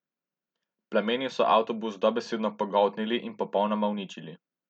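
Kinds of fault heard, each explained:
No audible technical faults turn up in this recording.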